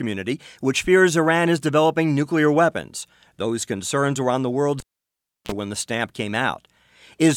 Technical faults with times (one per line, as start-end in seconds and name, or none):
4.80-5.52 cable pulled and plugged in